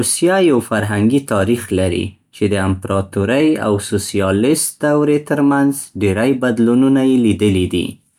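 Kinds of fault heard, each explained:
No faults are heard anywhere in this recording.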